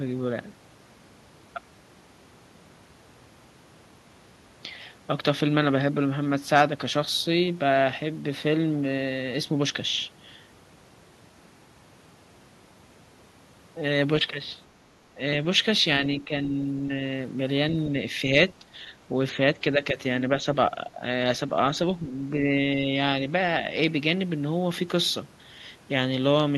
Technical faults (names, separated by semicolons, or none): speech suppressed in double talk